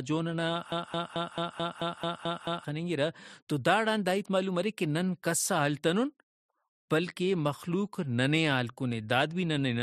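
At 0.72 s the speech catches on a fragment about 0.22 s long and plays it again and again. This is a broken-record loop. The same slice repeats exactly, back to back, nine times, until 2.65 s. It sounds like a stuck stutter with a steady, mechanical rhythm. The likely cause is a stalled player, encoder or stream that kept resending the last piece it held. Whatever should have been heard in those two seconds is gone.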